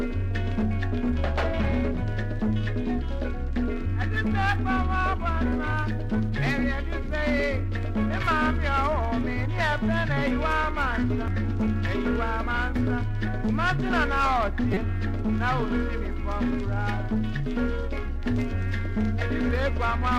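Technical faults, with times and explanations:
11.28 s and 14.74–14.77 s, damaged data in a compressed stream: brief blips break through the sound. Corrupted bytes in the compressed stream made the decoder misread those frames and lose sync, producing garbage output until it locked onto the next valid frame header.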